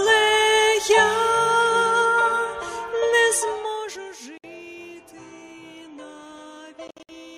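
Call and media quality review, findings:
Zipper noise, 3.24–4.16 s: ticking on a gain drop of around 15 dB, applied in 1 dB steps at roughly 30 steps per second with no smoothing. Waveform shows a staircase envelope; spectrogram shows faint broadband vertical lines at each step.

Bluetooth dropout, 4.38–4.46 s, 61 ms: hard silence, then audio resumes as if it had played through. Likely cause is packets lost on the wireless link. Flat gap in the waveform; blank vertical band on the spectrogram.

Bluetooth dropout, 6.88–7.10 s: a cluster of holes totalling about 152 ms over 213 ms, the longest 61 ms. Likely cause is repeated packet loss on the link. Waveform and spectrogram show several empty slices interleaved with sound.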